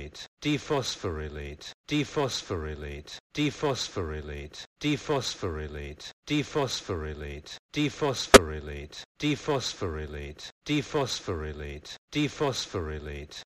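At 8.32 s a sharp, loud glitch cuts through the sound for about 60 ms, peaking around -5 dBFS. This is a corrupt frame decoded: flipped bits in a few compressed frames were played anyway, sending energy to the wrong frequencies.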